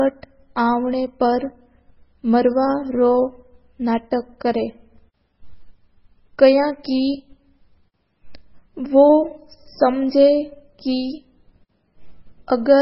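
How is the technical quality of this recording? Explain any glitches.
The quality is poor: the speech carries heavy, likely MP3 compression damage throughout. Nothing reaches above about 5.6 kHz, and weak frequency components flicker between frames, giving a watery, swirly sound, which fits a very low bitrate around 16 kbps. A plain low-pass filter would only dull the treble, without that swirl.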